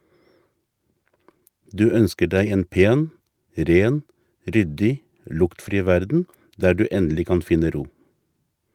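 A brief roughening in this speech recording, from 5.65 to 5.71 s, sounds grainier and noisier, with no dropout or silence. It is a lost packet rebuilt from error correction: packets went missing, and the decoder filled the hole with the lower-bitrate backup copy carried in the following packet, as Opus in-band forward error correction allows. About 40 ms was rebuilt this way, which fits two lost packets, and the reduced bitrate of those copies accounts for the coarser sound.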